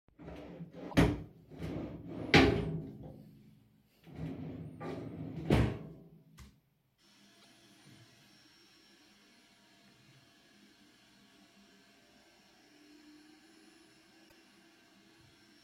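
Damaged data in the compressed stream makes the decoder misread frames and lose sync while it hunts for the next valid header. Each time the audio breaks into a brief chirp, squawk, click or short hole of about 70 ms: 0.88–0.94 s, 7.38–7.45 s and 14.25–14.32 s.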